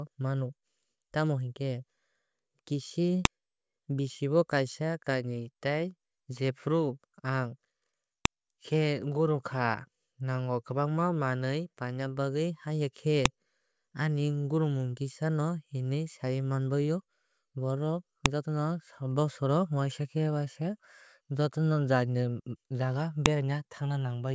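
Speech with a sharp click at 3.25, 8.25, 13.26, 18.26 and 23.26 s, every 5 s: that's file header played as audio, with each joined chunk's WAV header left in.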